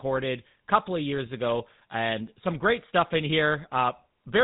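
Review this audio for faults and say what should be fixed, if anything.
The speech carries GSM full-rate codec damage from start to end, and it is plainly audible. The codec models the vocal tract and excites it with pulses kept at every third sample, causing buzzy roughness. Nothing passes above 4 kHz, which fits a 13 kbps GSM link. To prevent it, capture or route the call over a wideband codec instead.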